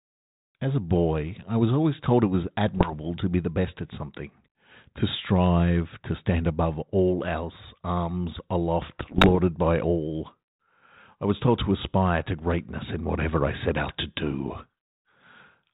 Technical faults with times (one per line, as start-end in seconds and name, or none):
2.66-2.93 bit errors on an ADPCM link
9.00-9.37 bit errors on an ADPCM link